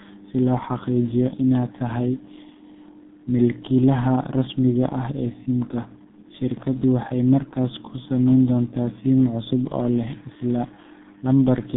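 Speech runs through the G.723.1 codec across the whole clip, which is heavily damaged by it. The sound is muffled and hoarse, with smeared consonants. That fits a low rate near 6 kbit/s, where long frames and a slowly updated voice model blur rapid changes. On a spectrogram, energy sits between about 150 Hz and 3.7 kHz, with a hard ceiling and nothing above 3.8 kHz. The harmonics look coarse and blocky over time.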